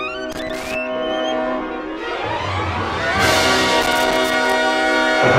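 Two bursts of loose connector crackle break up the sound, from 0.32 to 0.75 s and from 3.82 to 4.53 s. Each is an irregular, scratchy crackle. A worn or dirty contact is making and breaking as it shifts, chopping the signal into rough fragments.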